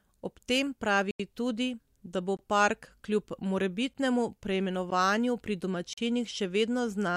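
Blocks of digital silence interrupt the speech at 1.11–1.20 s, between "tem pravi" and "tudi da bo park"; at 2.37–2.39 s, just before "park kljub"; at 3.94 s; at 4.90 s; and at 5.93–5.98 s. Each time, the audio was replaced by zeros, with gaps of 85, 21, 11, 13 and 43 ms. The longest gap fits a 4096-sample buffer. The signal drops abruptly to silence with no fade. The 11 and 13 ms gaps sound like ticks, and the longer ones sound like holes. A fade-out dropout or concealed packet loss would sound smoothed over instead.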